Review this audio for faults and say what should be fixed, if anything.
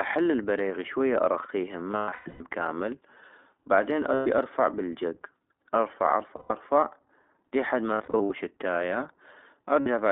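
The whole clip has passed through the iLBC codec. The speech sits in a narrow 300 Hz to 3.6 kHz band with a plainly rough, synthetic edge, which points to iLBC's 15.2 kbps mode with 20 ms frames. A wideband codec such as Opus would keep the speech fuller and cleaner.

There are lost iLBC frames at 1.92–2.41 s, 4.14–4.28 s, 6.36–6.52 s, 7.94–8.31 s and 9.80–9.88 s. The first dropout totals 400 ms scattered over about half a second, and the fourth totals 240 ms spread over 360 ms. In each gap the decoder repeats the last pitch cycle with some noise, so you hear a held, buzzy vowel, and the speech snaps back right after. Forward error correction or a steadier network path would cut these dropouts.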